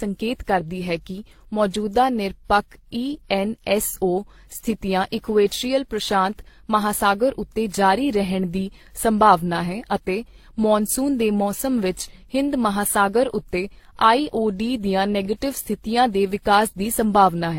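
From start to finish the speech carries a layered quality: different codec artefacts are heard together, and nothing is heard above about 16.3 kHz. This points to transcoding between lossy codecs, likely a low-rate Opus encode passed through WMA and then HE-AAC. A single lossy encode would produce one consistent artefact character. Here several kinds coexist, each later codec spending bits on the damage left by the earlier ones.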